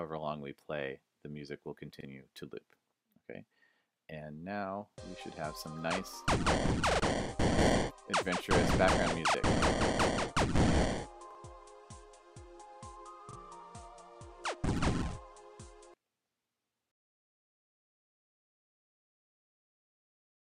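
Repeated buffer stutters hit at 2.01, 6.91 (repeated twice), 9.30, 11.31, 13.31 and 14.98 s. Each replays a 43 ms slice with hard joins, which fits a 2048-sample buffer running dry.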